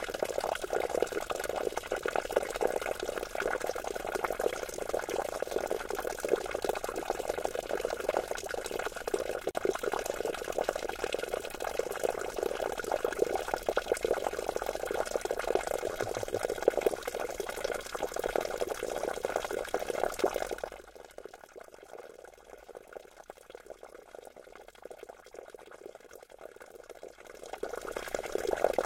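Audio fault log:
9.51 s: gap at a join of encoded pieces, a 39 ms hole where separately encoded segments meet, with encoder delay and final-frame padding left untrimmed.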